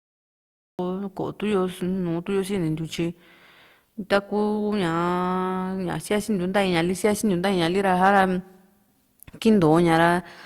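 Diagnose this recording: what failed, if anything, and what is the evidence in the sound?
Cut-off start at the recording stage. Digital silence runs to 0.79 s. Speech then begins mid-sound, with no attack. Capture started late.

Hard clipping at the converter or sample-format stage, 8.04 to 8.21 s. Peaks exceed full scale by about 2 dB. Their flattened tops produce brief crackle.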